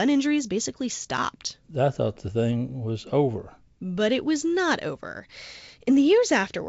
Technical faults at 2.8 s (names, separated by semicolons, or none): none